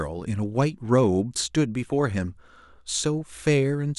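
No technical faults can be heard anywhere in the recording; nothing interrupts or alters the signal.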